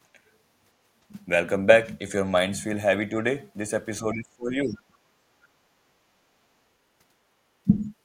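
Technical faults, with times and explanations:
4.03–4.97 s and 5.88–5.93 s, speech suppressed in double talk: the talker's voice drops by roughly 25 dB, in pieces over about 0.7 s in the first span, then briefly for about 50 ms. This is likely an echo canceller that could not tell the talker from the loudspeaker echo while both sides spoke, so it turned everything down. On a waveform the envelope caves in abruptly, and a spectrogram shows the harmonics thinning or vanishing in patches.
7.73–7.82 s, other side's voice leaking through: a short scrap of a second voice, about 20 dB below the talker, survives in the microphone signal for roughly 90 ms. The likely cause is residual loudspeaker echo that the canceller failed to remove. It sounds faint. A spectrogram shows a weak, separate band of harmonic energy overlapping the main voice, and the waveform shows only a slight low-level bump.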